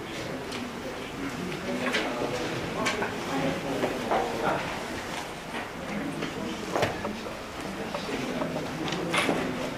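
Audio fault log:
4.02 to 4.05 s, compressed frames skipped: a brief jump where the sound lurches forward, as if a sliver of time has gone missing. Roughly one whole compressed frame was never played, either absent from the stream or rejected by the decoder as damaged, so about 50 ms of audio is lost. The 46.4 ms frame length sets the size of the jump.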